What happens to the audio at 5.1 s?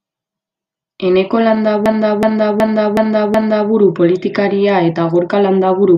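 Nothing goes wrong at 5.1 s; the speech carries on intact through that moment, with no dropout, click or distortion.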